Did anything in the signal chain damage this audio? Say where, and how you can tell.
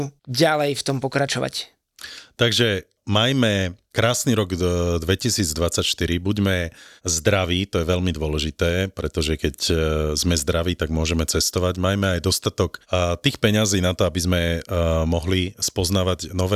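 No, no signal-chain damage heard.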